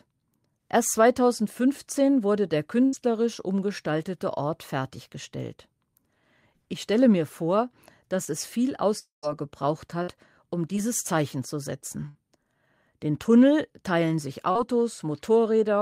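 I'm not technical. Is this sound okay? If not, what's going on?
No. The connection lost bits of the speech several times, and the playback patched over them.

There is a burst of packet loss at 2.85 to 2.95 s, 10.03 to 10.10 s and 12.09 to 12.17 s. Each time a small run of data went missing, between 60 and 80 ms. The receiver kept the last sound going and let it fade. You hear a short held buzz or hiss. Then the speech jumps ahead, with that piece gone.

Short concealed packet loss happens at 8.25 to 8.29 s, 10.76 to 10.79 s and 14.51 to 14.57 s. These gaps are tiny, 20 to 40 ms. The receiver stretched the sound just before each gap to cover it. It comes across as a quick smear or wobble. A short sound can drop out entirely.

From 8.99 to 9.25 s there is a longer break, likely a network dropout. About a quarter of a second never arrived. The last sound carries on as a fading buzz or hiss. 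It then goes quiet for roughly the final 130 ms. The speech returns afterward, but the missing part is lost.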